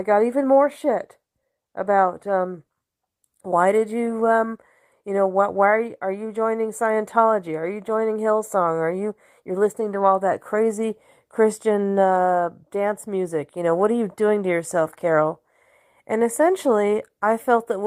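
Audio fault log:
No faults heard.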